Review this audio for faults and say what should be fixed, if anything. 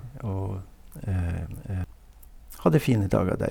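From the very start until 1.84 s, the speech is shadowed by a second, quieter copy of itself, about 5 dB down and trailing by roughly 0.7 s. It is full-band and dry, with no decay or room colour, and it cuts off abruptly at 1.84 s. This is a doubled audio track, most likely the same signal reaching the mix twice, once through a slower capture path or via a misaligned duplicate in the edit. To prevent it, route each source to the mix only once and check edits for stacked, offset copies.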